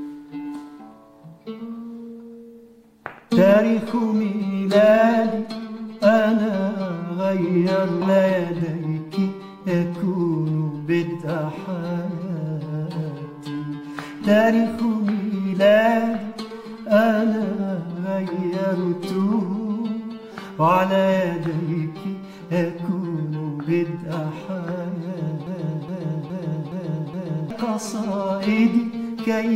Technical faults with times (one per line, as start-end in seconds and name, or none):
8.01 stream segment skipped
25.47-27.50 broken-record loop